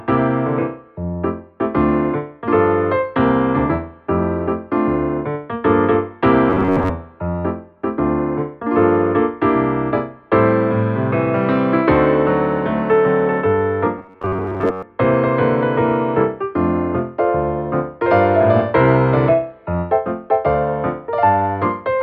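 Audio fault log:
6.50–6.91 s and 13.98–14.83 s, robotic sound from repeated short buffers: a stiff metallic buzz at 94 Hz, likely a roughly 11 ms chunk looping while most of the real audio gets skipped.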